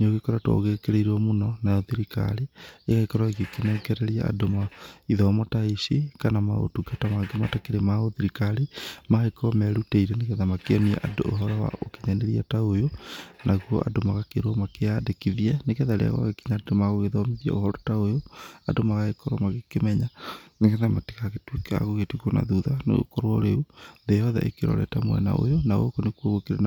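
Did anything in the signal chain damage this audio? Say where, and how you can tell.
No, nothing in the signal chain damaged this audio.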